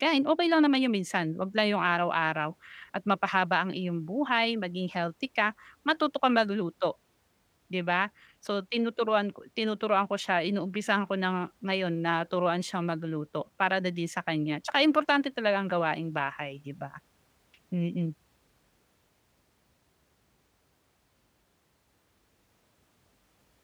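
Nothing in this recording of speech trips any alarm, with no moment along its run where something audibly goes wrong.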